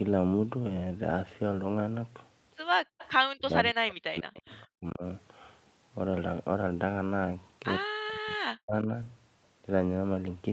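At 2.85 s the room tone behind the speech suddenly dives, about 40 dB down, and stays gone until 2.99 s, so roughly a sixth of a second of near-silence. That's background gated by the echo canceller: with the far end's audio coming out of the loudspeaker, the canceller clamps the mic hard, and the ambience just vanishes until it lets go.

Right as it releases, from 2.99 to 3.09 s, there's a faint delayed copy of the speech trailing the original by 157 ms and sitting about 20 dB under it. That's an echo leak. The loudspeaker side's canceller likely didn't fully scrub what its mic caught, so a scrap of the signal made it back down the line.

Then come three stretches of speech suppressed in double talk, likely from both sides talking over each other while the canceller couldn't tell the near talker from loudspeaker echo and turned everything down. From 3.35 to 4.52 s the speech sinks by as much as 40 dB, dipping for about a second's worth. 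At 4.8 to 5.03 s it's a lighter dip, around 10 dB and brief. From 7.83 to 8.88 s it's deep again, with about a second of the speech pulled down. Across the whole clip, nothing comes through above 8 kHz, which is just the top end of the call path.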